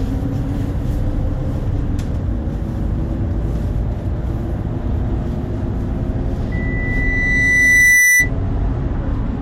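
At 6.52 s a loudspeaker feedback squeal kicks in: a steady 2 kHz tone swells over roughly a second and a half until it sits about 10 dB above the sounds, then stops at 8.30 s. The mic was hearing its own speaker, so that frequency kept feeding itself.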